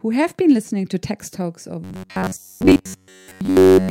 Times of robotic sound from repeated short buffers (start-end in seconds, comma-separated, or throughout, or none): 1.84-3.91